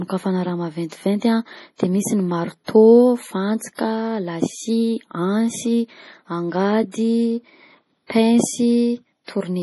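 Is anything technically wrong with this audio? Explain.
Yes. The speech carries heavy compression damage throughout, and several onsets are smeared by pre-echo.

Across the whole clip nothing remains above 11.5 kHz, and the remaining high band sounds watery and swirly, with metallic chirps on the s sounds. This is likely MP3 compression at a low bitrate, around 32 kbps: short of bits, the encoder cuts the treble and drops weak frequency lines that flicker on and off between frames. A spectrogram shows a hard ceiling at 11.5 kHz and patchy, blinking islands of energy below it.

Pre-echo appears at 0.89 s (about 28 ms), 2.65 s (about 33 ms), 6.92 s (about 22 ms) and 8.07 s (about 31 ms). At each point a sharp attack sits late in a coding block, so quantisation noise meant for the loud part spreads into the quiet moment before it. You hear a brief hiss ahead of the onset, and the attack sounds soft. 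On a waveform a thin noise skirt precedes each transient, and on a spectrogram a faint broadband smear leads the onset.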